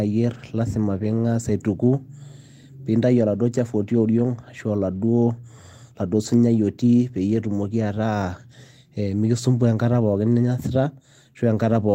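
Lost packets rebuilt from error correction at 3.91–4.01, 4.95–5.01, 6.25–6.27, 7.27–7.45 and 10.31–10.45 s: rougher, noisier low-bitrate copies fill each gap, with no silence or smeared repeat as plain concealment gives.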